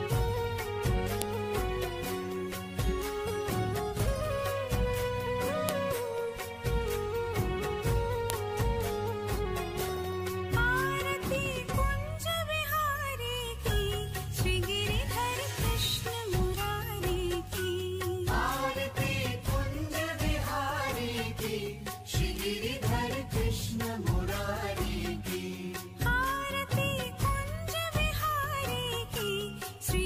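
Sharp, loud clicks land at 1.22, 5.69 and 8.30 seconds: a file header played as audio. Separate WAV pieces were joined without their headers being stripped, so each header's bytes are read as samples and snap out at the piece boundary regardless of the surrounding sound.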